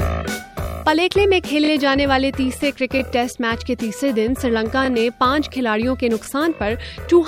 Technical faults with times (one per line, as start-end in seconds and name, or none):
1.65-1.70 repeated buffer
3.00-3.02 repeated buffer
4.85-4.88 repeated buffer
6.25-6.27 repeated buffer